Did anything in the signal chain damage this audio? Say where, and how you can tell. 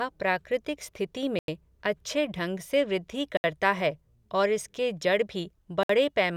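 Yes, at the wireless playback stage. Three short cuts to silence, at 1.39–1.48 s after "प्राकृतिक स्थिति", at 3.37–3.44 s before "है और इसके जड़", and at 5.83–5.89 s. These are likely Bluetooth stalls, where the headphone buffer ran dry.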